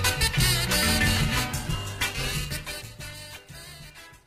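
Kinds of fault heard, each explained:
Call bitrate drop: from 1.65 s the encoder is starved, consistent with roughly 11 kbps, so the sound turns rough and muffled; the spectrogram shows the high band vanishing.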